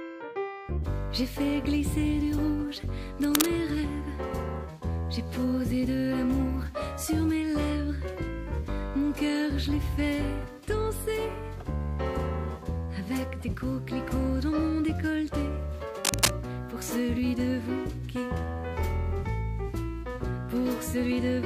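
Two short bursts of cable scratch noise break through the audio, from 3.21 to 3.46 s and from 16.05 to 16.31 s, each about a quarter of a second of dense, ragged rustling. The first sits at roughly the level of the sound itself and the second slightly above it. The likely cause is a worn cable or connector being moved, its contact resistance jumping about. Unlike a single click or steady hiss, each burst is a thick, irregular scrape.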